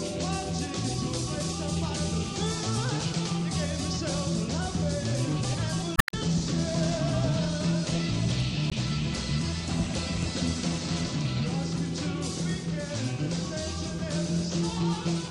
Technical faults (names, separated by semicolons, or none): MP3 compression; damaged data in a compressed stream